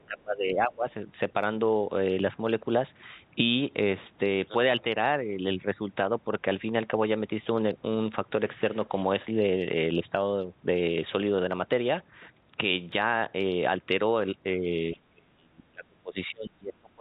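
Speech, carried over a call path with nothing above 4 kHz, which fits a G.711 A-law codec. The speech level drops sharply from 0.06 to 0.85 s, by about 20 dB at its deepest. It dips slightly, by about 5 dB, from 14.59 to 14.65 s. From 14.95 s to the end it sinks by about 35 dB. This is likely speech suppressed in double talk. The echo canceller could not tell this talker from the far side's loudspeaker echo, so it turned everything down. Between 12.42 and 14.42 s there are periodic USB or driver dropouts. Tiny slivers of audio, far shorter than a millisecond, are skipped every 0.5 s, about five times in all. Each one leaves a regular tick or pop in the speech. Such evenly spaced gaps point to a background task briefly blocking the audio bus or driver on a fixed cycle.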